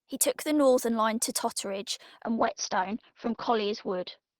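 At 2.28 s the call's bandwidth estimate falls and the encoder is pushed into a call bitrate drop. The sound fits a fall from about 40 kbps to about 8 kbps, lasting to the end at 4.40 s and sitting at its lowest for 1.35 s. Starved of bits, the codec quantises the speech coarsely and narrows the band from 20 kHz to 6 kHz, so the voice turns muffled, rough and watery.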